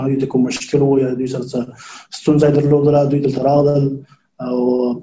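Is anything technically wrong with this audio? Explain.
No, the signal is technically sound throughout, with nothing in its level, continuity or frequency content that points to a problem in recording, processing or transmission.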